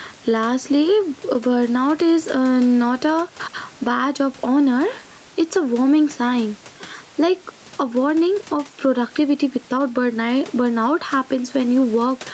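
Gain pumping throughout: the gain ducks around 10 dB under loud speech, likely from too much gain slamming a fast limiter.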